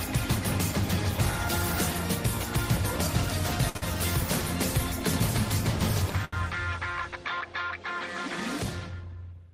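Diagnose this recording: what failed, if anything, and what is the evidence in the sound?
Network: short stalls from late packets at 3.69, 3.77 and 6.25 s; the emptied jitter buffer stretches sound 49–77 ms, showing as smeared spectrogram bands.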